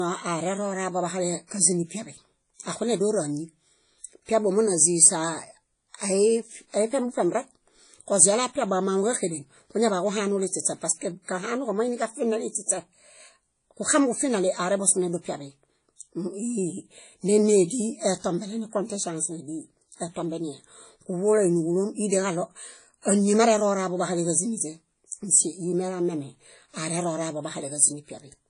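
WMA compression runs throughout this speech: a ringing, washy quality with hiss that swells and fades with the signal, and nothing above 10.1 kHz. The likely cause is a low-bitrate transform codec, which fits roughly 32 kbps, zeroing weak components.

Pre-echo appears from 12.66 to 12.69 s and again from 23.02 to 23.05 s, between "níġulom ideġaɭo" and "áñi marerooraḃo bahaleġáziniźe". Quantisation noise meant for a sharp attack spreads 26 ms and 32 ms earlier, so a brief hiss precedes each smeared onset.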